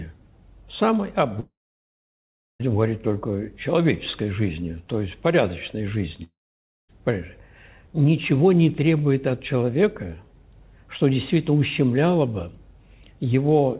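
At 1.4 to 2.62 s and 6.23 to 6.90 s, likely long network dropouts: a brief fading buzz, then a flat waveform and a blank spectrogram gap, before the sound resumes without the lost part.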